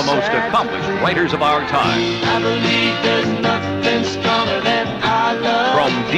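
No technical faults can be heard anywhere in the clip. Nothing in the sound stands out as a problem at any point.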